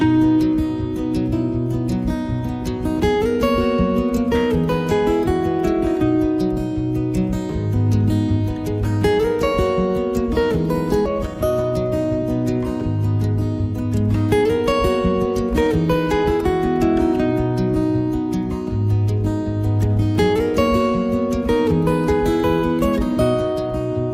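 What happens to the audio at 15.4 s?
At 15.4 s the audio is inside a jitter buffer speed-up that runs from 14.33 s to 16.83 s. The receiver's buffer had built up more audio than its target, so it trimmed short slices, each one or a few pitch periods long, over and over to drain the excess, removing roughly 150 ms in total. Playback runs about 5% faster at unchanged pitch, so that stretch sounds slightly rushed.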